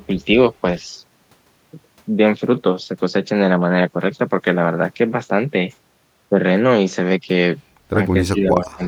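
From 8.33 to 8.83 s the speech sinks by roughly 15 dB over about 0.4 s. This is speech suppressed in double talk, likely from an echo canceller ducking the talker while the far side also spoke. Unlike a packet dropout, the voice is turned down by the canceller rather than lost in transit.

From 8.62 s to the end, an echo leak adds a faint delayed copy of the speech, 373 ms late and about 25 dB below it. This likely comes from loudspeaker pickup that the echo canceller missed. It differs from room reverb: it is a distinct repeat, not a smooth decaying tail.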